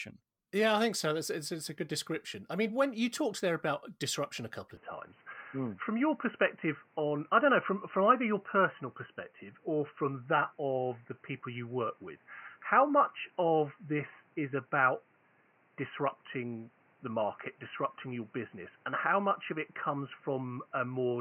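Speech that turns dull and boxy at 4.77 s, after "about disruption a couple," losing everything above 3 kHz, with a level change of about 5 dB and faint new background noise, likely from an input switched to a poorer device.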